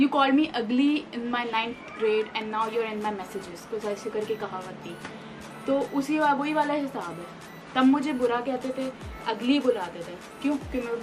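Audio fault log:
No fault can be heard anywhere in the clip. There is nothing in the audio that calls for an entry.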